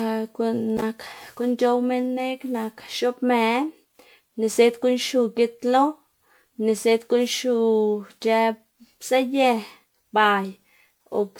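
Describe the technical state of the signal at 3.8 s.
At 3.8 s the speech sounds swirly, smeared and hollow, with blurred consonant attacks, more degraded than a single encode would leave it, and the same quality runs through the whole clip. This is generation loss, likely from around seven successive MP3 passes at a rate fitting 128 kbit/s. Each re-encode quantises on a shifted frame grid, so noise and spectral holes pile up. Nothing is present above about 20.9 kHz.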